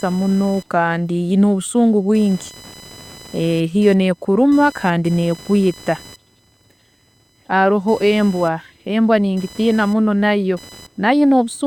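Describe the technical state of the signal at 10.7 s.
At 10.7 s there's computer activity noise, running through the whole clip: a buzzy whine around 1 kHz, roughly 25 dB under the speech, from computer load disturbing the shared audio ground.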